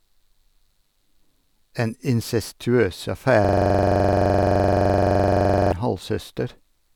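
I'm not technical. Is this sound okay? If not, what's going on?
No. There is a system hang loop from 3.45 to 5.72 s. The computer froze while the sound hardware kept replaying one 43 ms snippet, about 23 times a second, as a buzzing stutter.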